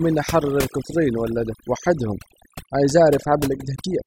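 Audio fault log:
Throughout, overdone noise removal. The noise reduction was pushed far too hard on a noisy speech recording. Each frequency band that sits close to the estimated noise level is pulled right down or cut out. The quiet parts of the voice fall below that line and vanish with the noise. The background drops, scattered with twinkling specks.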